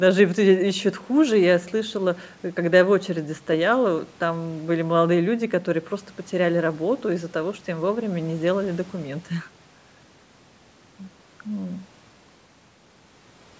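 No technical faults are audible.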